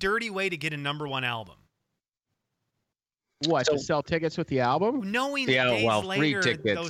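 No technical faults can be heard anywhere in the speech recording.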